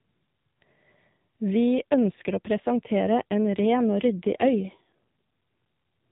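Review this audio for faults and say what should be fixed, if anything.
An AMR rate drop runs from 1.77 s to 5.02 s. The speech turns rougher and more synthetic there. The band stays the same and there is no gap. Before and after, the narrowband mobile codec sounds lightly coded. The change fits a drop from 12.2 kbps to 5.9 kbps. On a weak radio link the network asks the codec for fewer speech bits and spends the rest on error protection. Fewer pulses then model the voice, so it buzzes. To prevent this, improve radio coverage or signal strength on the call path so the link holds the higher AMR rate.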